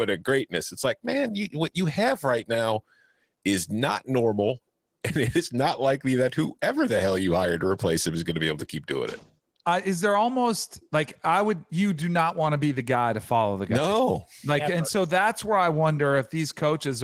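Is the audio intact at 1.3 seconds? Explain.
No. At 1.3 seconds the speech carries Opus voice compression, as it does throughout. The lower band is coded by linear prediction with coarse excitation, giving a hoarse, slightly robotic edge that fits a rate around 16 kbps. Unlike a simple low-pass filter, the treble is present, coded by a separate layer above 8 kHz.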